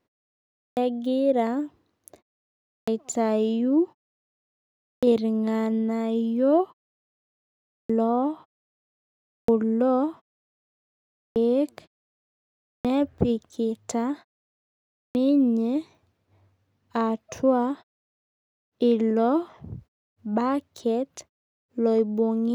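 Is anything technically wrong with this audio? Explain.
Yes. The speech has a clipped start after a pause, eight times: at 0.64, 2.74, 4.90, 7.77, 9.35, 11.24, 12.73 and 15.03 s. Each follows a silence of 0.6 to 1.1 s, and the output device, having dropped into sleep, takes 118 to 135 ms to wake, so the opening sounds of the next phrase vanish and it bursts in abruptly. Unlike muted pauses, where the background fades out during gaps but every sound arrives intact, here the speech itself is cut.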